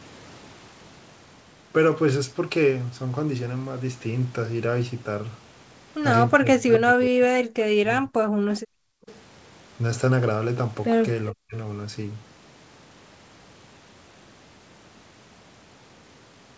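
From 6.42 to 8.43 s, the echo canceller likely failed to tell the near talker from loudspeaker echo while both sides spoke, producing speech suppressed in double talk. For roughly a second and a half in total, the speech dips in pieces by as much as around 40 dB.

At 8.54 to 8.6 s and again at 9.08 to 9.2 s, residual loudspeaker sound likely slipped past the canceller and was sent back as an echo leak. Each time, a brief scrap of the speech returns 410 ms late, roughly 25 and then 30 dB below the direct sound.

Between these, from 8.71 to 9.07 s, the canceller clamped the microphone while the loudspeaker played, causing background gated by the echo canceller. The room sound drops by about 40 dB for roughly 400 ms, then comes back.

At 11.32 to 11.54 s, double talk likely triggers the same suppression again, cutting a short stretch of speech by around 40 dB.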